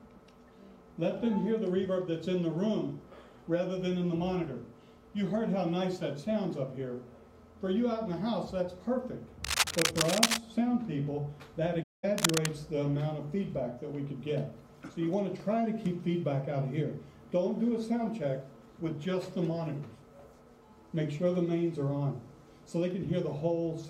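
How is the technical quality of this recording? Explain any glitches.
The recording has three glitches, two of one kind and one of another.

From 9.44 to 10.37 s and again from 12.18 to 12.46 s there is cable scratch noise. Dense, uneven bursts of scratching sit roughly as loud as the sound itself, likely from a worn cable or connector whose contact resistance jumps around as it moves. A spectrogram shows ragged broadband smears, and the waveform shows spiky clusters.

At 11.82 s comes AAC frame loss with muting. The sound fades out and back in, leaving a soft-edged hole of about 0.21 s, which fits roughly ten missing frames that the decoder replaced with silence. The waveform shows a tapered gap, and the spectrogram shows a blank vertical band.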